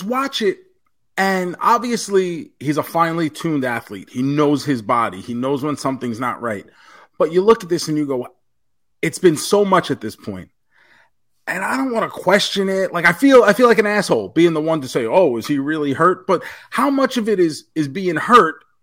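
A speech recording with hard clipping at six points. The signal exceeds what a gain stage or converter can pass, so peaks are sliced flat and gain upper harmonics. Short crackles occur at 7.49–7.52 s, just after "not right but you", 9.26 s, 15.17 s, 16.01–16.07 s and 18.33–18.40 s, overdriven by about 1 to 7 dB. The longest, 13.05–14.45 s, is about 6 dB over.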